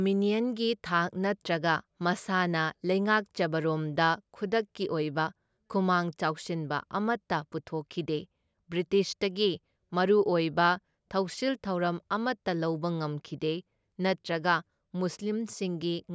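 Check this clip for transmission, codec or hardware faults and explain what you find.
No transmission, codec or hardware faults can be heard in the speech, and the signal stays continuous and stable throughout.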